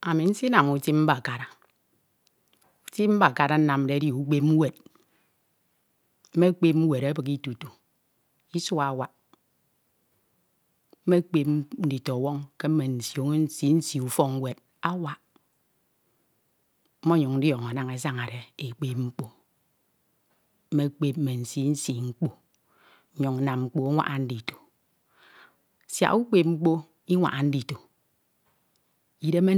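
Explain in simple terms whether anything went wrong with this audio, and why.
Nothing went wrong here.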